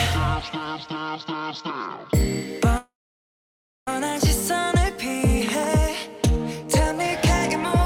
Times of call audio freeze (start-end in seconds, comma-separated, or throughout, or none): 2.77-3.88